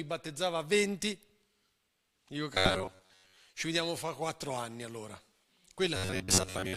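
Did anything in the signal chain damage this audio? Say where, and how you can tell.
Yes, robotic sound from repeated short buffers at 2.54 to 3.37 s, just before "ci vediamo fra", and again from 5.96 s to the end. The speech collapses into a rigid metallic buzz near 94 Hz. The likely cause is a driver or buffer stage starved of data, replaying a chunk of roughly 10.7 ms in place of most of the real audio. On a waveform the same short cycle repeats. A spectrogram shows a fixed comb of 94 Hz harmonics.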